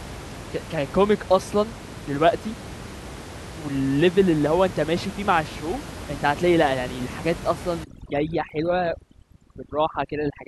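From 7.84 s to the end, overdone noise removal takes over. The suppressor pushes bands near its noise estimate far down. Quiet speech goes with them. Room noise, about 14 dB below speech, drops and breaks up into twinkling specks.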